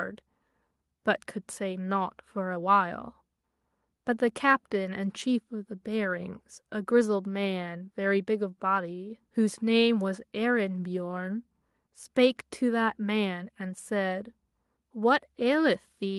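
No technical faults can be heard anywhere in this speech recording.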